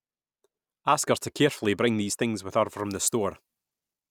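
From 2.77 s, after "these things with her", to the end, pre-emphasis left on: treble boosted without the matching cut, about 8 dB at 10 kHz, sounds thin, bright and sibilant.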